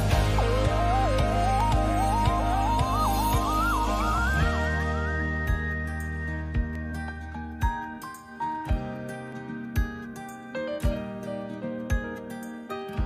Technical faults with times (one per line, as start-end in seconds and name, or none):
1.60-11.90 clock drift buffer slips